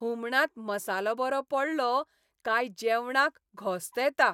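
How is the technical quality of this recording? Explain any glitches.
No glitches are audible here; the recording has no technical faults to explain.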